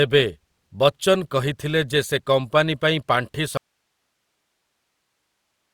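Speech runs fine until 3.57 s, then hits an audio dropout to a faint residue: it cuts abruptly to hiss roughly 55 dB down and stays there to the end, likely a lost signal with the path still live.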